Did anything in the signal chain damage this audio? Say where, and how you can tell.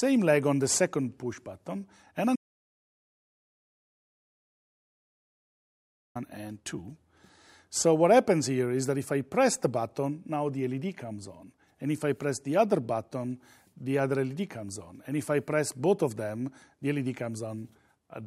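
Yes: an audio dropout to silence at the input, 2.36 to 6.15 s. The waveform flatlines to silence and the spectrogram goes blank, likely a lost input with the recorder still writing zeros.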